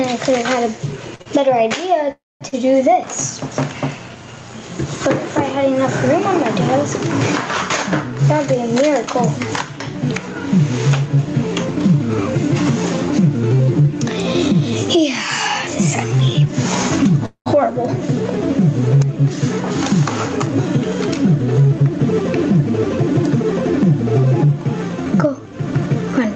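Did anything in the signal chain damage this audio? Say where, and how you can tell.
Yes. The gain stage ahead of the call processing is set far too high, and a fast limiter or compressor, likely in the capture chain, clamps it down on every loud sound. The result is gain pumping throughout, with a swing of around 20 dB. Loud and quiet parts sit unnaturally close in level, so the sound is squashed and breathes audibly.

The network delivered packets late or too slowly between 1.15 and 2.54 s, and the jitter buffer repeatedly ran dry. This causes repeated stalls, a stutter: three short gaps, the longest 43 ms, are filled by the receiver stretching the last sound, about 119 ms in total. Nothing is lost, but the audio catches and drags through that span, which is how you can tell it is held-up delivery rather than dropped audio.

Two longer holdups, likely network delays, emptied the jitter buffer completely and produced a call audio freeze at 2.12 to 2.43 s and again at 17.26 to 17.48 s. 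In each, the last sound is continued as a fading buzz that decays to near silence, for about 0.23 s in the first and 0.11 s in the second. Playback then resumes exactly where it stopped, so 0.29 s and 0.2 s of extra delay are inserted without any content disappearing.

After delayed packets arrive in a burst, the jitter buffer holds more audio than its target. The receiver trims that backlog by cutting out pitch-period-sized slices many times in a row, which is a jitter buffer speed-up. At 14.53 to 17.04 s the sound runs about 4% fast, shedding roughly a tenth of a second. At 21.30 to 22.63 s and 24.91 to 26.35 s it runs about 6% fast. Pitch stays put, and the pacing of these later two sounds hurried. All of this sits on a call codec path band-limited to about 8 kHz.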